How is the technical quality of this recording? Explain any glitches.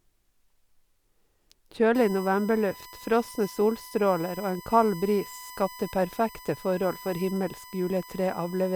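There's one real problem here: USB whine. From about 1.95 s right through to the end, a steady tone at 1 kHz sits under the speech, and it's the strongest part of the noise. That's the USB bus pulling current in 1 ms frames, and those bursts leak into the audio through the shared power or ground. It stays locked at one pitch, roughly 20 dB below the speech, and it comes through as a thin, nagging whistle.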